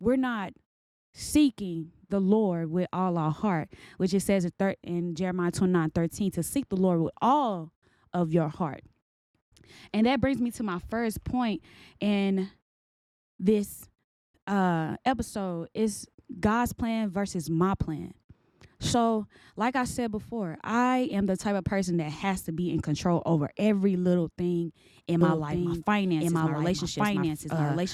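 A speech clip with a doubled audio track from 25.21 s to the end. From that point a second, full-band copy of the speech runs about a second behind the original at roughly the same level, with no decay or room colouring, and it begins abruptly rather than fading in. The likely cause is the signal being captured a second time through a slower path, or an edit that leaves two out-of-step copies overlapping.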